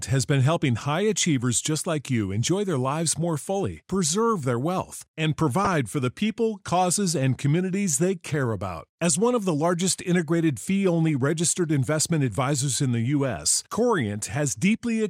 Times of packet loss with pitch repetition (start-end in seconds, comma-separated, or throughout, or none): none